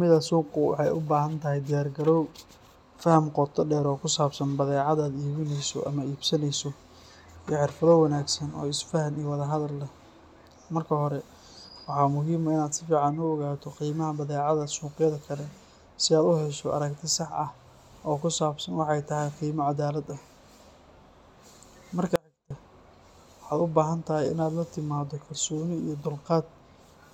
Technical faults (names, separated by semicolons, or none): audio dropout to a faint residue